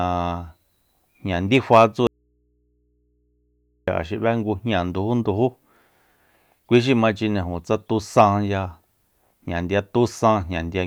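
At 2.07 s the speech cuts off abruptly mid-flow, leaving only a low mains hum far below the normal level until it snaps back at 3.88 s. This audio dropout to a faint residue, about 1.8 s long, likely reflects the signal being lost while the input stayed live.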